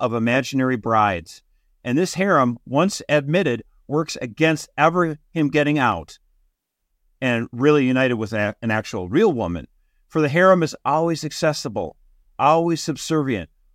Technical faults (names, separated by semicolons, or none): CD scratch ticks